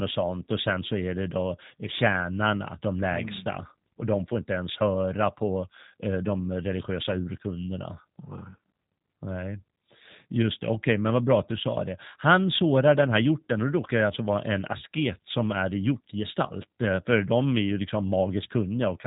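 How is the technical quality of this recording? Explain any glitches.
The quality is limited by low-bitrate voice coding, audible throughout the speech.

G.729 codec, throughout: the speech is not stored as a waveform but rebuilt at the receiving end from a model of the vocal tract, a pitch predictor and a few pulses per short frame, a scheme that fits an 8 kbit/s VoIP link. Nothing above 3.8 kHz survives, so sibilants and consonant edges are dull. The damage is plainly audible: the voice stays intelligible but sounds rough and somewhat synthetic.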